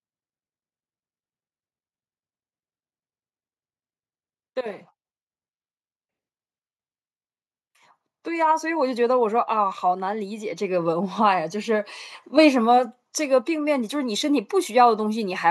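Automatic gain rising from 8.23 to 11.84 s: the gain control judged the input too quiet and pushed it up about 8 dB, swelling speech and background together.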